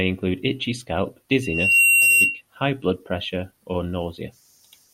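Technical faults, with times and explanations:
1.42–2.41 s, loudspeaker feedback squeal: Just after "include itchy scalp", a pure tone near 2.8 kHz rises out of the speech. It swells over roughly 0.4 seconds and peaks about 10 dB above the talker. The microphone is hearing its own loudspeaker, and at this one frequency the loop gain passes unity. The tone therefore feeds itself until the amplifier limits it or the loop is broken. It stops before "high blood pressure or".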